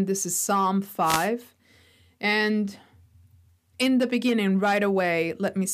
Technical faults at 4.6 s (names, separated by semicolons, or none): none